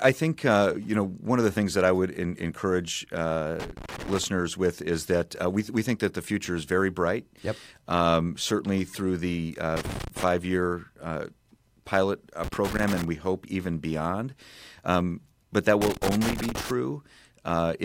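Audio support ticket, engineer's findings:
Irregular crackle and scratching bursts at 3.60–4.24 s, 9.76–10.24 s, 12.44–13.04 s and 15.82–16.71 s. Loose connector crackle: a worn or dirty contact makes and breaks as it shifts, chopping the signal, with any DC on the line adding pops. Reseat or replace the connector.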